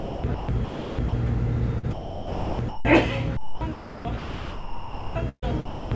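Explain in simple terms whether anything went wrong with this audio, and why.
Yes, something went wrong. In three stretches, from 0 to 1.13 s, from 1.79 to 2.85 s and from 3.37 to 5.91 s, the sound keeps dropping out and being replaced by a soft, even hiss, so it comes across as choppy. This is sound chopped by the voice detector, likely because the sending side judged quieter moments not worth sending and let the receiver fill the gaps with artificial background noise. Almost 2 s of the last stretch is filled this way. The call's sound carries nothing above 8 kHz, which is ordinary for this kind of call.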